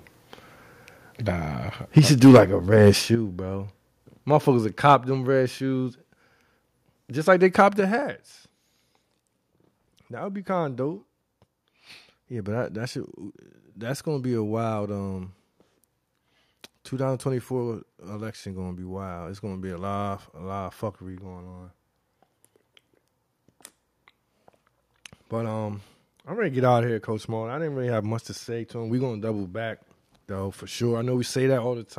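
The speech clip has repeated microphone overload early on. Between 1.97 and 2.4 s the peaks are flattened hard, running about 6 dB past the converter's limit with roughly a tenth of the samples clipped, which gives those syllables a harsh, crackling edge. Shorter, milder clipping follows at 2.87 to 2.89 s, about 1 dB over, and at 4.89 to 4.93 s, about 2 dB over. The likely cause is a microphone input volume set too high, so the loudest moments exceed the converter's ceiling and their tops are sheared off. Alongside this, the whole signal, background included, drops in level in abrupt steps as the microphone volume is stepped down: about 3 dB at 1.99 s, about 8 dB at 3.15 s, about 4 dB at 4.95 s and about 5 dB at 7.8 s. The first and third steps come directly on the heels of clipped peaks, and the pattern likely reflects the call software detecting an overloaded input and cutting the device gain in single increments rather than ramping it smoothly.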